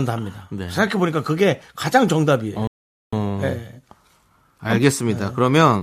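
At 2.67 s the speech hits a rebuffering stall: playback exhausts its downloaded audio, falls silent until 3.13 s, then resumes exactly where it stopped, adding 453 ms.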